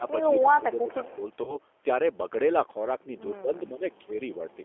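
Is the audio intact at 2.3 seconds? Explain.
No. At 2.3 seconds, as throughout, the speech carries G.729 codec damage: it sounds rough and synthetic and stops near 3.4 kHz, which fits an 8 kbit/s pulse-coded speech model.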